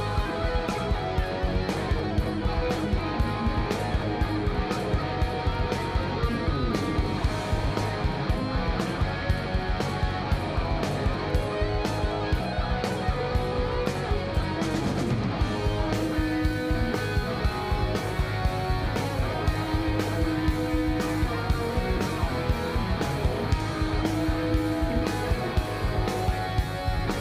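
Nothing technical stands out here; the sound just runs along without a hitch from beginning to end.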